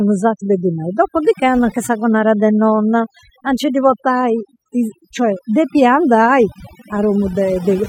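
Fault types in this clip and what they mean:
Overdone noise removal: the noise reduction on this speech was pushed way too hard, so any frequency band sitting close to what the tool took for the noise gets clamped down or cut out entirely, and the softer bits of the voice get swept away with it. You hear it the whole way through: the gaps go almost dead quiet apart from little sparkling chirps.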